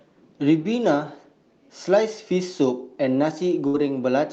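Near the end, from 3.67 to 3.76 s, there's a burst of packet loss on the call path. The receiver stretches the last sound out for about 64 ms, fading it, and then jumps ahead, so about 60 ms of the speech never arrives.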